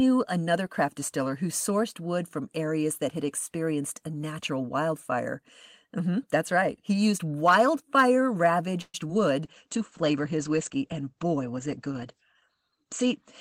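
Right after "used wildfire", at 8.81 to 8.95 s, comes a call audio freeze: the last sound stretches into a fading buzz for about 125 ms, with about 30 ms near silence. Then it resumes where it stopped, nothing lost and everything 125 ms later. The likely cause is delayed packets draining the jitter buffer. A spectrogram shows a blurred, decaying horizontal smear, and the waveform shows a shrinking tail.

Two short concealed packet losses follow, at 9.01 s and from 9.07 to 9.10 s. About 10 ms of audio missed the decoder each time, and the receiver filled the hole by extending the preceding sound before blending back. Each is a brief smear or wobble, visible as a brief discontinuity in the waveform.

From 9.45 s to the end, a call bitrate drop takes the encoder from 32 to 15 kbps and narrows the bandwidth from 20 kHz to 8 kHz. The sound turns muffled and rough. On a spectrogram, all energy above 8 kHz abruptly disappears, leaving a flat ceiling.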